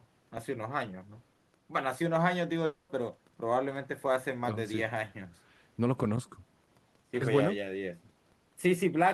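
At 2.65 s the speech breaks into a buzzy, smeared continuation of its last sound, lasting 240 ms until 2.91 s, then resumes with that stretch missing. This is likely a long network dropout, with the receiver filling the entire gap by concealment.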